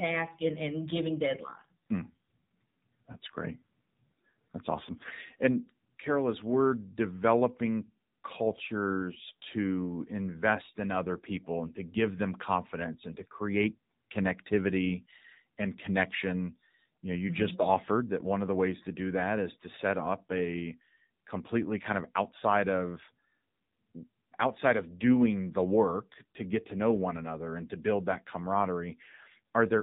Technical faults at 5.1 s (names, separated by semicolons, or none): AMR narrowband mobile codec; AMR bit errors